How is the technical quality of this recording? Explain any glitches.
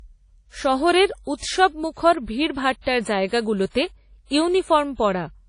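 Quality is limited by audible codec damage across the whole recording. The sound rings and smears, with a hiss that swells and fades along with the speech. This points to WMA compression as the likely cause, and fits an early WMA encoder at about 32 kbps. Its long transform blocks spread quantisation noise over tens of milliseconds, so it washes around each sound. Weak spectral detail is discarded. Nothing remains above 10.1 kHz, which dulls the top end.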